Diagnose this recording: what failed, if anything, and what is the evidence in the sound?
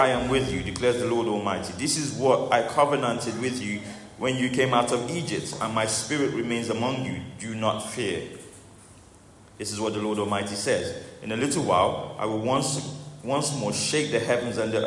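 No faults detected anywhere.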